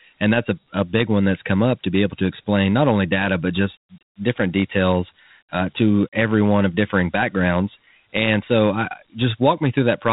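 From start to finish the speech carries Dialogic VOX ADPCM damage, and it is plainly audible. Each sample is squeezed into a 4-bit step from the one before, at a rate near 32 kbps that fits 8,000 samples a second, so nothing sounds above about 3.8 kHz. The quantiser's coarse steps leave a gritty hiss that rides on the speech itself.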